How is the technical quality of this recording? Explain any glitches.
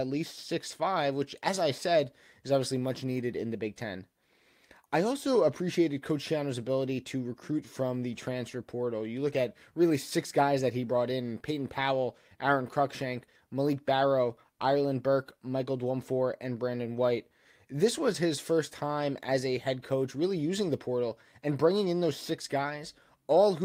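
No audible glitches or faults.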